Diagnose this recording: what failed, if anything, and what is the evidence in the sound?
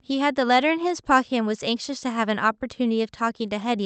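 Clock drift between sender and receiver, at the buffer stage: the sending clock runs roughly 2% slow relative to the receiver, so the jitter buffer keeps draining. Small timing hiccups recur unevenly across the clip, heard through an Opus call path limited to 8 kHz.

Repeated timing corrections run from 0.15 s to 3.82 s. To cover the shortfall, the receiver repeats short pieces, stretching the sound to 98% speed and adding something like 70 ms overall. The edits are small and unevenly spaced.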